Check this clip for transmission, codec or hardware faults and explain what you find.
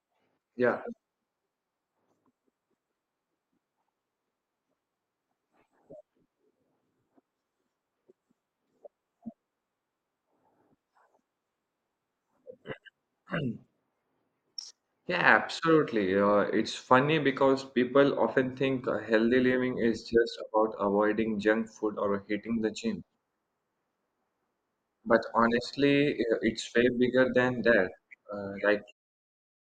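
No transmission, codec or hardware fault can be heard in this speech clip. The only change in level is a smooth fade-out around 29 s, the kind an editor applies to close a recording.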